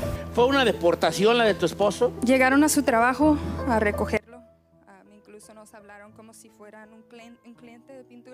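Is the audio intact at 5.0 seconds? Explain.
No. From 4.17 s to the end, the sound drops by about 25 dB to a faint copy, with the centred content largely gone. The likely cause is one channel inverted: one stereo channel has flipped polarity, so everything common to both cancels when they are summed to mono, leaving only their difference. On a waveform the amplitude collapses abruptly at 4.17 s; a spectrogram shows the whole band dimming.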